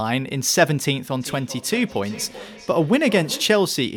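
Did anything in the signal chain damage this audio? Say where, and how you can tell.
Yes. From 1.2 s to 3.71 s there is feedback echo between two devices, a fault at the call-processing stage. The speech comes back roughly every 400 ms, at its loudest about 17 dB below the direct sound. One device plays the other's microphone signal into the room, and that microphone picks it up again. Each echo canceller removes only its own device's playback. Room reverberation would blur the sound continuously, but here each repeat is a distinct copy at a fixed interval.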